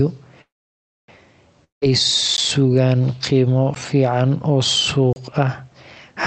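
At 0.41 s the sound stops and a fading buzz takes its place. This is a call audio freeze. The likely cause is packets held up in transit, so the jitter buffer ran dry. The receiver stretched the last sound for about 0.67 s. Most of that, about 0.62 s, is silence. At 1.10 s the audio resumes exactly where it stopped. Nothing is lost, but everything after runs about 0.67 s late.

From 1.64 s to 1.84 s there is a long network dropout. Again the last sound is drawn out as a brief fading buzz and then goes quiet. The silent part lasts about 0.15 s. This time the audio returns further on. About 0.18 s of the sound likely never arrived.

Three blocks of digital silence follow. The first, at 2.37 s, lasts 14 ms. The second, at 3.75 s, lasts 13 ms. The third runs from 5.13 s to 5.16 s and lasts 31 ms. In each one the sound drops straight to silence and back with no fade. The two short ones sound like ticks. 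The longer one is a small hole. An output buffer that was not filled in time would explain them. Throughout, the sound is band-limited to about 8 kHz, which fits a call codec such as Opus.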